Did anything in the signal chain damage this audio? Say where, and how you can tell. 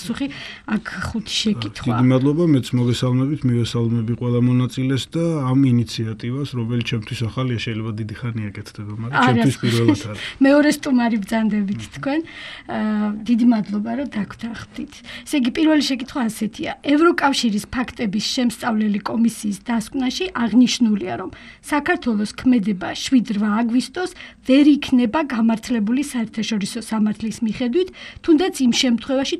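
No, nothing in the signal chain damaged this audio.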